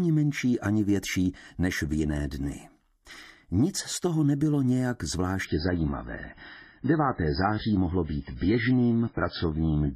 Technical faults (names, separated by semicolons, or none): adaptive stream at a lower bitrate